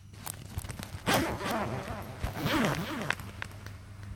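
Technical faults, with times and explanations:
Throughout: doubled audio track. Every sound is followed by a flat, full-band repeat about 10 dB quieter, trailing by roughly 400 ms, with no decay or room colour. The likely cause is a second capture path or an edit layering two out-of-step copies.
0.56 s, 1.51 s, 2.46 s: audio missing between chunks. Short skips recur about once a second, each dropping around 50 ms, with the two sides butted together and no gap of silence. This likely comes from processing in chunks of about one second and losing a sliver at each handover.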